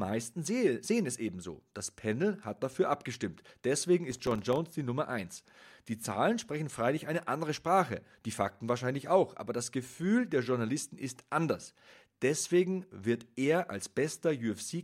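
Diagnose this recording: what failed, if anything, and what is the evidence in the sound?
Driver buffer processing fell behind, missing around twenty tiny deadlines; from 4.11 to 4.72 s, brief silent gaps cause processor overload crackle over the speech.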